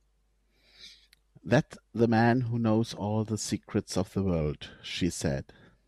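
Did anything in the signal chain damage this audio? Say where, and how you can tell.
Yes. From 4.41 to 5.03 s the speech slows by 6.1% and drops 110 cents, just over a semitone, then snaps back. Speed and pitch moving together points to a drift correction step, likely at the buffer stage, where clock-matching software briefly changed the playback rate.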